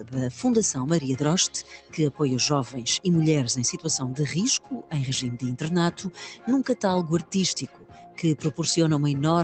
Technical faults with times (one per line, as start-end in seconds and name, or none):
0.00-9.44 noise suppressor applied to music or sounds
0.00-0.15 sound cut by the noise suppressor
1.63-2.20 sound cut by the noise suppressor
4.59-4.93 sound cut by the noise suppressor
7.66-8.19 sound cut by the noise suppressor